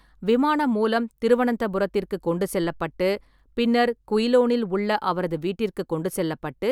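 No technical faults can be heard in this speech clip.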